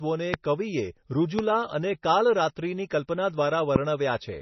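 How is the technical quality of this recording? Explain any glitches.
The technical quality is poor because of heavy, lossy coding damage that runs through the whole speech clip. The likely cause is MP3 compression at a very low bitrate, one that fits roughly 24 kbps. With so few bits, the encoder has cut everything above 6 kHz and dropped weak frequency detail that flickers in and out between frames. As a result, the speech sounds dull and muffled, with a watery, swirling texture, metallic chirps on s sounds, and smeared consonant attacks.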